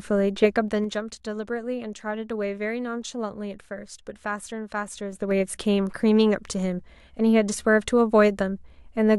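Zipper noise at 0.44 to 1.0 s, as the level falls about 10 dB, and at 5.08 to 5.4 s as it rises: unsmoothed 3 dB gain steps, each ticking audibly.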